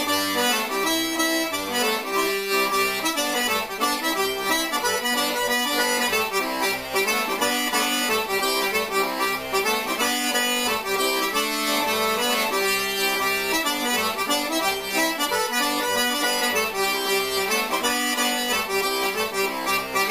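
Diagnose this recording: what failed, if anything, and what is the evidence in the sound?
No stage in the chain, from wiring and conversion through processing, transport and playback, leaves an audible failure anywhere in this recording.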